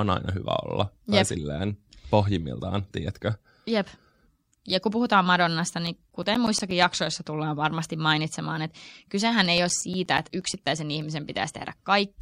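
Speech clip with CD scratch ticks from 5.87 to 6.95 s and 9.46 to 11.01 s: rhythmic ticks roughly nine per second, the longest around 10 ms, where a disc blemish defeats error correction once per revolution.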